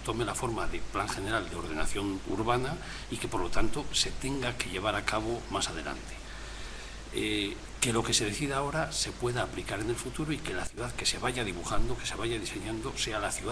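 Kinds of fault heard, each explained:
Sudden gain jump: At 10.67 s the level drops abruptly by about 10 dB, sound and background noise falling together, and it stays there until 10.77 s. There is no fade between levels. The likely cause is a gain setting applied instantly without a ramp.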